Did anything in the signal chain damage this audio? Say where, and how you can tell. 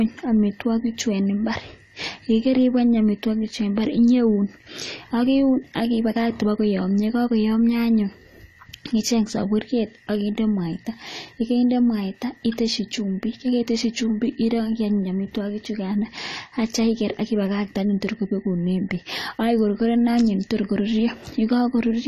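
Yes, at the codec stage, throughout: the speech sounds dull and fizzy, likely AAC compression at about 32 kbps; a spectrogram shows a hard ceiling at 14 kHz.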